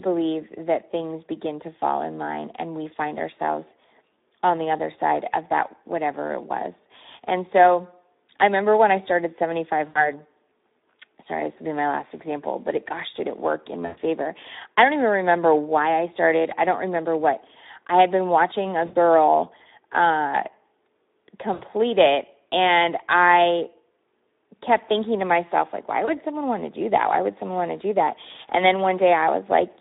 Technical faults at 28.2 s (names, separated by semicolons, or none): Speex codec